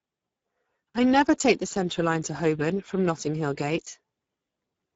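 From start to end the speech carries Speex codec damage, clearly audible as a hoarse, noisy grain that fits a bitrate near 10 kbps. The spectrogram shows a hard ceiling at 7.7 kHz, blurred harmonics, and a diffuse, noise-like wash above 4 kHz.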